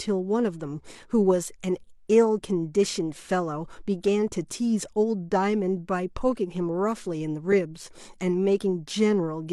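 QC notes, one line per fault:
7.51 to 7.54 s, damaged data in a compressed stream: a brief glitch lasting about 24 ms. A stretch of the encoded stream is corrupt, so the decoder reads garbage as frame data, loses frame sync and hunts forward for the next valid header. The misdecoded fragment produces the glitch.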